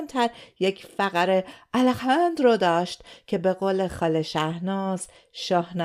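Nothing in this bit of speech catches the ear as a technical fault; it just runs along without anything going wrong.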